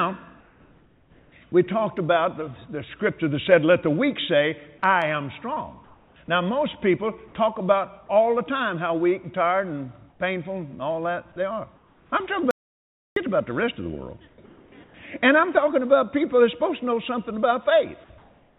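From 0.4 to 1.52 s the background turns into a steady, featureless hiss, likely comfort noise in place of the background, from discontinuous transmission. On a spectrogram it appears as an even, textureless band. At 1.5 s about 10 ms of sound is lost, likely dropped by the voice detector and replaced by that noise. The waveform shows a brief flattening into uniform fuzz.

The same pattern repeats. Comfort noise likely fills 5.84 to 6.28 s, and about 10 ms of sound at 6.26 s is likely dropped by the voice detector. Smooth synthetic noise likely returns at 10.1 to 10.2 s and 11.76 to 12.12 s, each about 4 dB quieter than the real background, a visible step down in level.

From 12.51 to 13.16 s the audio drops out to silence for about 0.66 s, likely from lost input. The waveform goes dead flat and the spectrogram goes black, with no room tone.

Comfort noise likely replaces the background again at 14.28 to 14.94 s, and from 18.18 s to the end, the last at matching level. 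Throughout, the call path's spectrogram shows nothing above 4 kHz.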